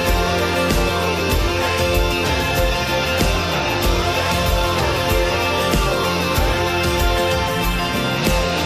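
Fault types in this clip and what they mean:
Compressed frames skipped: At 1.07 s, about one damaged or missing frame goes unplayed. The sound jumps ahead around 20 ms.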